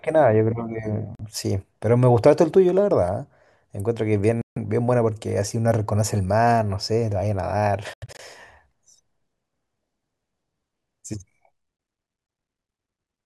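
Speech with four short silent holes, likely Bluetooth dropouts: 1.15–1.21 s, 4.42–4.58 s, 7.94–8.20 s (a scattered cluster of gaps whose longest run is about 85 ms) and 12.27–12.29 s. The hole lengths come in steps of roughly 21 ms, which fits whole radio packets failing to arrive. Unlike an underrun stutter or a skip, the sound doesn't stall or jump. Each gap just goes quiet, and the speech resumes exactly where it would have been had it played on.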